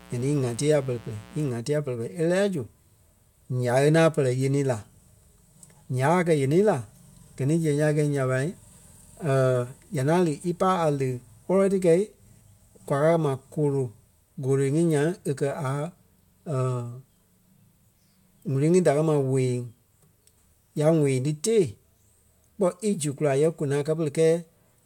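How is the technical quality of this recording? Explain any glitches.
The recording opens with a mains buzz from 0.0 to 1.5 s. Sharp switching spikes, most likely from a dimmer, a rectifier or a missing shield, are leaking into the signal path. They occur twice per cycle of the 60 Hz supply, which produces a dense series of harmonics running well up into the kilohertz range. In this clip it sits roughly 25 dB below the speech and is heard as a steady, raspy buzz under the start of the audio.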